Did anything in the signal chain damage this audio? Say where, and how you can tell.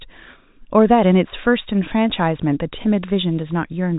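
No, nothing in this speech stood out as damage on listening, and the narrow telephone band, with nothing above about 3.8 kHz, is simply how the G.711 A-law line carries it.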